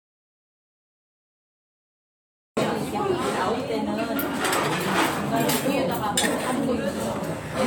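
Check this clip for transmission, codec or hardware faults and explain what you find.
One hardware-type fault is present. The clip opens in an audio dropout to silence already under way, running from 0.00 to 2.57 s: silence with no room tone, then sound arrives abruptly. The likely cause is a lost input, such as a disconnected device or mute, while recording continued writing silence.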